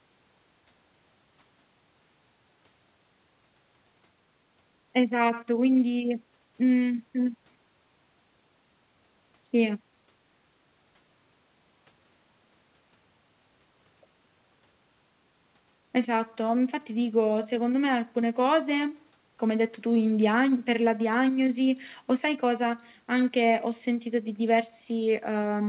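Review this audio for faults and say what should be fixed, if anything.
Nothing here needs fixing: the speech has come through a call path coded as G.711 mu-law at 64 kbps, so its content stops at 4 kHz as that telephone-band codec dictates, and no fault can be heard in the signal.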